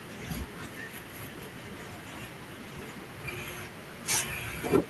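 A speech recording, with nothing technically wrong with it.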